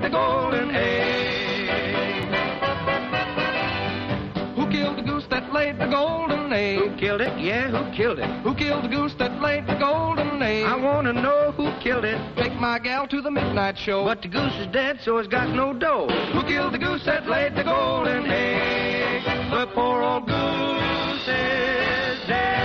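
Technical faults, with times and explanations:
0.53, 2.23, 7.26, 12.46 and 18.04 s: dropped buffer (overrun). Each is a small jump forward in the sound. There's no gap of silence; the audio on either side of the missing piece is butted straight together. The likely cause is the recording side falling behind, so the hardware overwrote samples before they were read. Around 10 ms goes missing each time, closer to 20 ms at 2.23 s.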